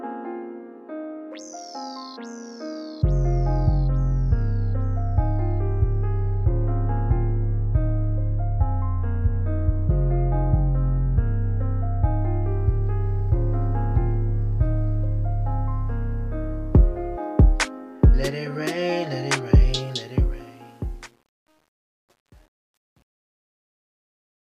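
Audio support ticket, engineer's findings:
Truncation distortion on the fade-out, 19.80 s to end (24.59 s). Tail turns gritty, worst 20.61 s onward. Fade/gain stage keeps too few bits with no dither; step size fits roughly 9-bit resolution. Waveform: tail collapses into square staircase steps. Spectrogram: broadband hash rising as level drops.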